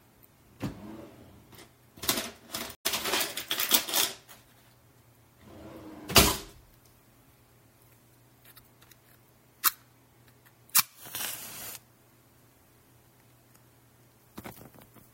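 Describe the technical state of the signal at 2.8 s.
At 2.8 s the sound breaks in a stream reconnect, silent from 2.75 to 2.85 s for about 95 ms. The player lost its connection and restarted decoding mid-stream, so the sound resumes roughly 70 ms further on rather than where it stopped, which sets it apart from a plain dropout.

Throughout, and at this moment too, MP3 compression is plainly audible, likely from a 64 kbps MP3 encode. Weak frequency lines flicker between frames, giving a watery, swirly texture with smeared attacks, not the steady dullness of simple low-pass filtering.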